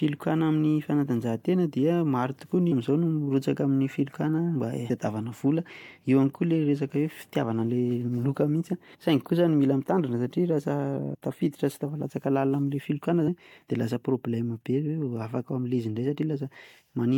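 Damaged data in the compressed stream corrupts several frames, so the decoder misreads them, loses sync and hunts for the next valid frame header. Each event is a brief chirp or blip in the speech: at 2.71 s between "maro tokoa" and "amin'izao no mirotsaka amin'ny", at 4.89 s, at 8.94 s after "miloka mihintsy", from 11.14 to 11.16 s before "tafiditra sy tafalatsaka", and at 13.27 s.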